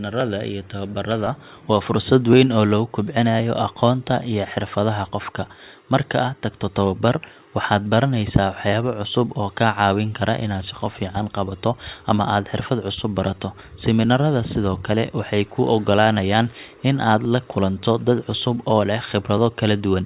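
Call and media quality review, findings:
Regular clicks through the speech, roughly every 1.07 s, from 0.21 s to 19.38 s, about twenty in all. Likely clock drift buffer slips between two independently clocked devices, near 0.1% apart, each slip dropping or repeating a few dozen samples. Call audio band-limited to 4 kHz, consistent with G.711 mu-law at 64 kbps.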